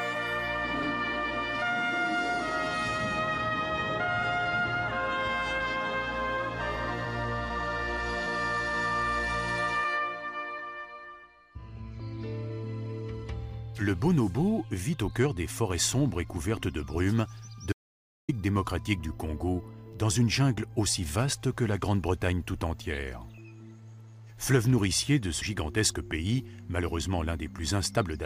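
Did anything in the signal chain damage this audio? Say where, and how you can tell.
Yes. From 17.73 to 18.29 s the sound cuts off mid-flow and returns after about 0.56 s of audio dropout to silence. The gap is silent with no room tone, so the input was lost before the recorder, most likely a brief device disconnect, failed link or stray mute at the driver or input stage. On the waveform this is a flat line; on a spectrogram, a solid black vertical band with no noise floor at all.

At 25.41 s and again at 27.97 s the audio jumps forward: compressed frames skipped, a codec or storage fault. The first jump drops around 70 ms, roughly five frames; the second loses a few tens of milliseconds. On the waveform there is no gap, only an abrupt change in the envelope. A spectrogram shows a thin vertical seam where the content doesn't line up.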